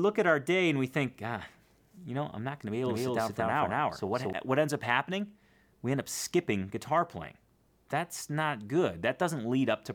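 A doubled audio track runs from 2.85 to 4.33 s: an equally loud copy, likely captured twice, trails about 200 ms behind and starts and stops abruptly.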